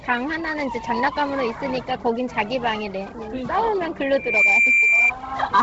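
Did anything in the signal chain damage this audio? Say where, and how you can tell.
Yes. Throughout, the sound has a grainy, breathy top and nothing above 7.7 kHz, the noise-filled upper band of a heavily squeezed transform codec. That points to the codec stage, likely Bluetooth LC3 compression at a low rate around 16 kbps with 10 ms frames.

Then from 4.12 to 5.12 s a single 2.4 kHz tone swells up in about a third of a second and sits roughly 10 dB above the sound. That's loudspeaker feedback squeal: the mic is hearing its own speaker, and the loop gain at that frequency tops one.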